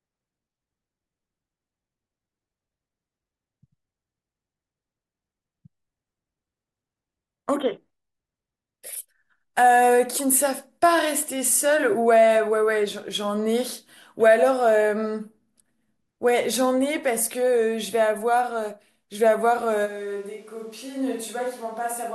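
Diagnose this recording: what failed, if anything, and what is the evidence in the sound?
At 19.87 s the speech abruptly goes roomy and hollow and stays that way to the end. The low end thins out, the level drops by around 10 dB, and the room noise comes up to sit only about 30 dB under the speech. That sudden, sustained change points to a switch to a distant microphone, likely at the analogue capture stage, where the close mic's feed dropped out and a farther pickup, such as a camera mic, took over.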